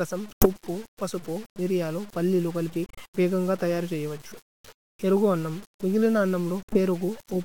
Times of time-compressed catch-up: none

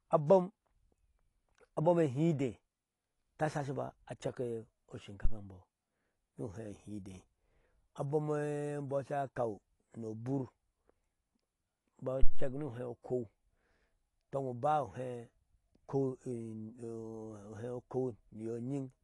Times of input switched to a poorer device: none

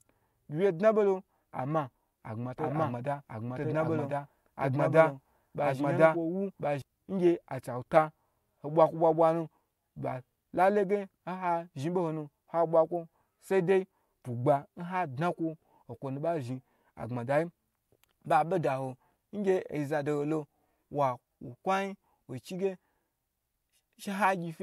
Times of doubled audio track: 2.58-6.82

